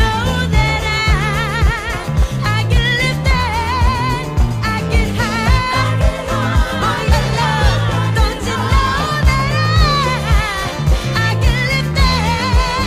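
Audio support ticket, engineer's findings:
No audible faults found; nothing to escalate.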